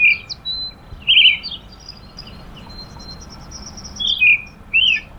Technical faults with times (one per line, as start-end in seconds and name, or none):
2.17-4.11 doubled audio track